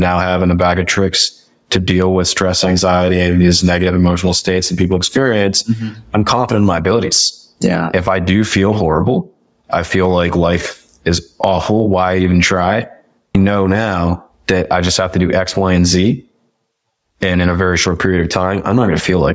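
Speech recorded through call microphone processing, with the bass rolled off and nothing above 8 kHz, suffers gain pumping throughout. The gain swings by around 20 dB, ducking under each loud syllable and flattening loud and soft parts. The likely cause is input gain set far too high, with a fast limiter clamping down. On a waveform the envelope looks squashed, while a spectrogram shows the level dimming beneath each loud syllable.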